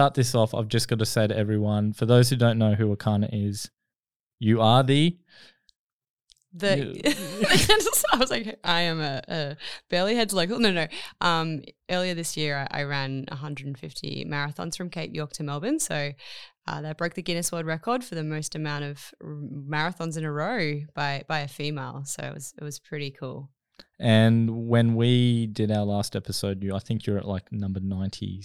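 No technical faults can be heard anywhere in this recording.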